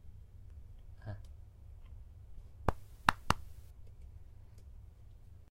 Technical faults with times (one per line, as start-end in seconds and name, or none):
2.37 compressed frames skipped